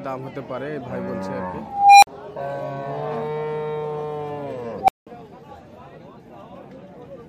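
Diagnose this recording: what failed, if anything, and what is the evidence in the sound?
An unstable filter in the processing stage fails twice. At 1.61–2.07 s a tone around 700 Hz builds for 417 ms, then cuts to 46 ms of silence; at 4.79–5.07 s it builds in 93 ms, then 186 ms of silence. Bad recursive coefficients let the output grow until overflow and reset.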